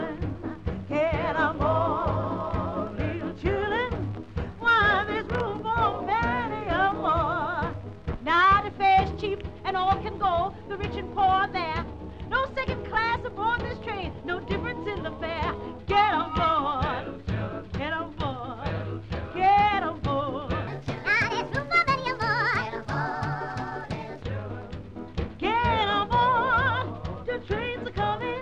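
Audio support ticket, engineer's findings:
20.67–24.22 s: wrong sample rate. Sound 1.38x fast, pitched up 5.6 semitones, which fits 32 kHz material played at 44.1 kHz. Spectrogram: partials shifted upward, events time-compressed.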